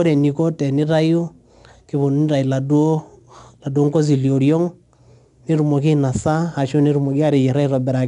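4-bit ADPCM compression runs throughout the speech. Each sample is coded as a small step from a predicted value, so a gritty hiss rides on every loud passage, consonant attacks smear, and nothing sounds above 10.7 kHz, which points to a bitrate near 89 kbps.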